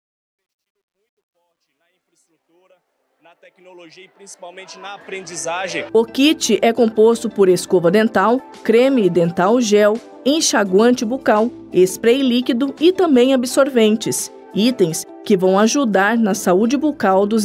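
From 0.0 to 6.0 s, the fade-in stage truncates its output to too few bits without dither, which fits a 12-bit stage. The rising sound is gritty truncation distortion on a fade. It is worst before 3.1 s, where the level is faintest.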